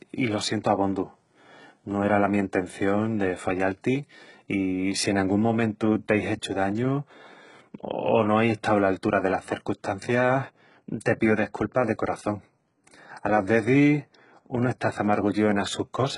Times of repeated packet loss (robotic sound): none

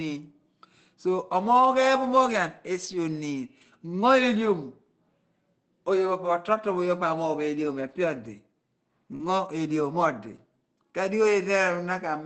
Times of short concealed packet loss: 9.15-9.21

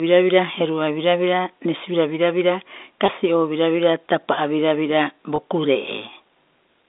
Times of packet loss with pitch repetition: 3.06-3.08, 5.36-5.38

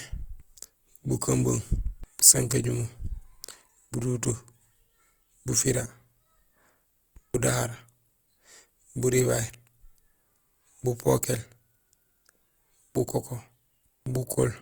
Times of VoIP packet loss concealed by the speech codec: none

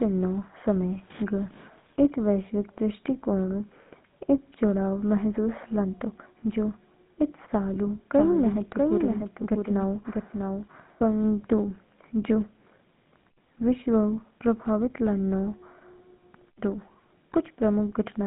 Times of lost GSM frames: 7.74-7.77, 10.72-10.75

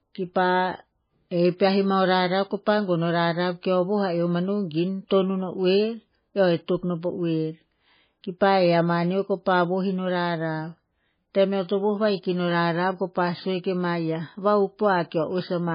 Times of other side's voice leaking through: none

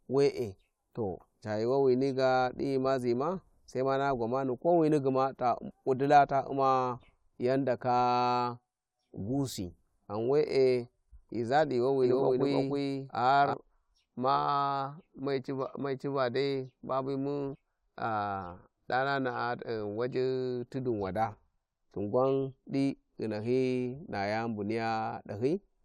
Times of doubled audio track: 12.03-13.53

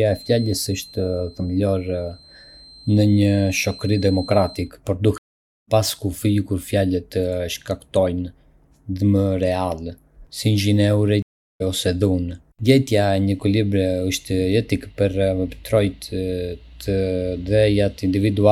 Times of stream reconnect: 5.18-5.69, 11.22-11.62

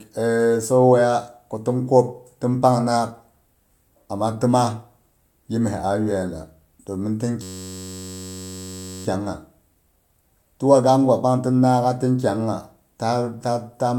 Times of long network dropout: none

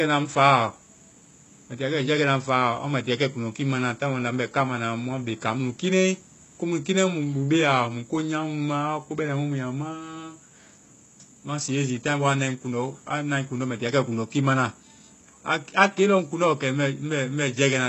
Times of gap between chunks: none

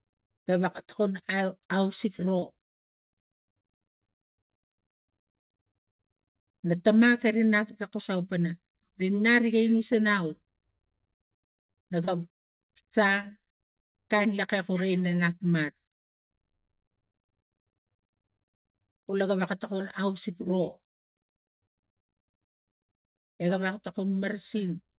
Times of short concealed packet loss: 2.39-2.45, 12.05-12.10

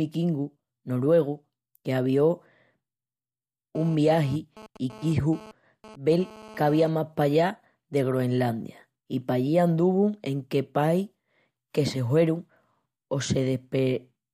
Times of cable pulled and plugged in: none

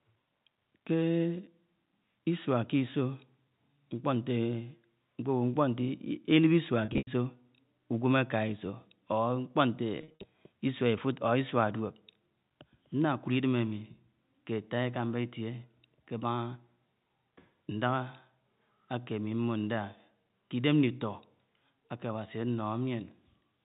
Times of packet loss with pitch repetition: 6.85-7.07, 10.01-10.23

